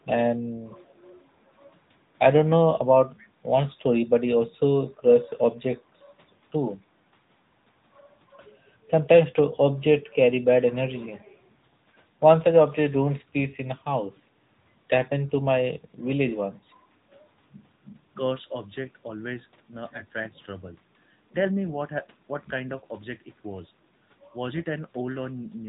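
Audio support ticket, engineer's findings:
Speech band-limited throughout, nothing above 4 kHz; voice buzzy, synthetic, plainly audible. Component: AMR narrowband mobile codec (AMR-NB) in the path. Vocal-tract model plus sparse pulse excitation per 5 ms; damage level fits the 10.2 kbps mode.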